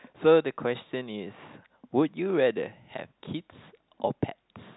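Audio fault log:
No fault to log: the speech comes through a telephone channel with nothing audible above about 3.9 kHz.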